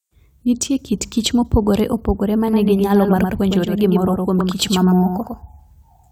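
From 2.48 s to the end of the speech, a doubled audio track appears: a second full-band copy of the speech runs about a tenth of a second behind the original and only a few decibels quieter, most likely because the signal is captured again through a slower path. Unlike a room echo or reverb, the trailing copy has no decay and no added room colour, repeats only once, and switches in abruptly at 2.48 s.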